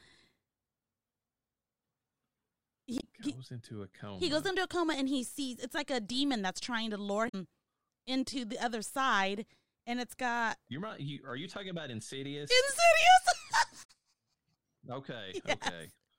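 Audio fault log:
2.97–3.04 s, 7.25–7.35 s, 13.81–13.90 s: damaged data in a compressed stream. Three brief bursts of 70 to 100 ms where the speech gives way to a short chirp or squawk. Corrupted bytes in the encoded stream leave the decoder unable to read those frames correctly. It outputs garbled spectral content, loses frame sync and scans for the next valid header before normal decoding resumes.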